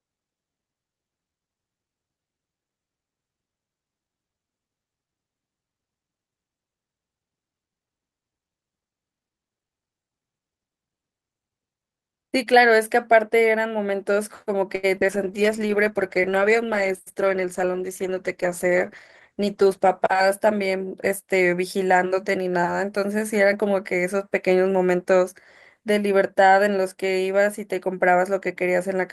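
From 14.75 to 15.10 s the speech turns choppy, with pieces missing, with four short holes and a longest gap of 79 ms. This is repeated packet loss. Lost packets were patched by stretching the preceding sound, covering 106 ms, about 31% of the stretch, while 60 ms simply dropped out.

Right after, from 15.14 to 20.93 s, the speech goes rough, watery and dull-topped. This is a call bitrate drop. The encoder was pushed from 32 to 13 kbps and held at the lowest rate for about 4.8 s, coding coarsely and trimming the high frequencies.

Inside that stretch, from 16.80 to 17.44 s, the speech briefly sounds hurried at an unchanged pitch, running at 109% speed. This is a jitter buffer speed-up. The receiver was holding excess audio and shed roughly 70 ms by cutting out short pitch-period slices in quick succession.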